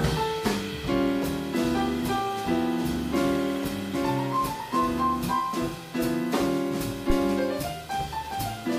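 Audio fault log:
7.10 to 7.18 s, phantom power thump: a supply switched on or off on a live input sends a voltage step through the coupling capacitors, giving a deep thump peaking near about -13 dBFS that dies away in 19 ms; the waveform shows one large low-frequency swing, the spectrogram a brief dark band at the bottom.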